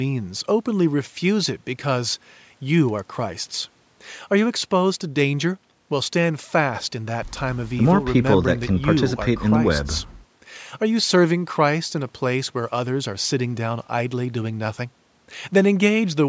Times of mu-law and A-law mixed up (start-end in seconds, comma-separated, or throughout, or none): none